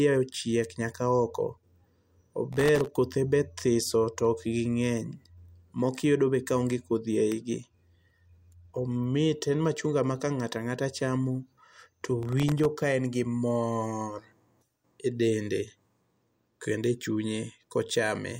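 From 2.53 to 2.87 s, just before "kothe be", and again from 11.73 to 12.65 s, there's processor overload crackle. Dozens of tiny buffers, each well under a millisecond, miss their deadlines and drop to silence, so the speech gets a gritty, tearing crackle until the load eases.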